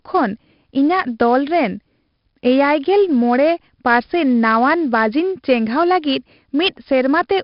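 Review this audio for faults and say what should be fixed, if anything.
4-bit ADPCM compression damages the speech throughout. Each sample is a coarse 4-bit step, so gritty hiss rides every loud syllable. Nothing remains above 5.3 kHz, which points to a sample rate near 11 kHz. Keep a linear PCM or modern-codec master and encode at a higher sample rate.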